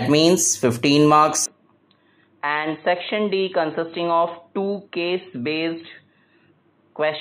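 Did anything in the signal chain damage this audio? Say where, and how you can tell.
Yes. From 1.46 s to the end, the audio turns dull and boxy, with nothing above 4.1 kHz, a level drop of about 5 dB and a new low noise floor. There is no gap at the change, pointing to an input switched to a poorer device, likely at capture.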